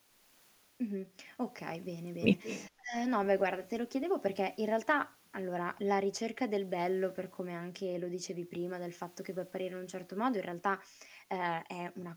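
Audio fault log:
2.43–2.69 s, echo leak: a faint delayed copy of the speech returns about 209 ms late, roughly 15 dB down, likely from a loudspeaker path the echo canceller missed.
2.76–2.94 s, speech suppressed in double talk: the speech drops sharply, by around 30 dB at its deepest, as the canceller likely mistakes overlapping talk for echo.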